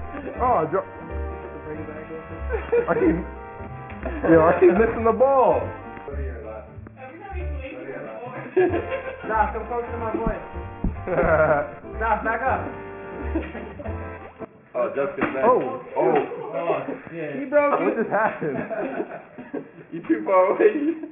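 The whole clip has aliasing from start to finish. Everything tops out hard at 3 kHz, and the high content that should have been filtered away is folded back below that edge instead, landing on unrelated pitches about 20 dB under the main sound. That gives a gritty, metallic fizz to anything bright. It fits a drop to a 6 kHz sample rate without the anti-aliasing filter that should have come first.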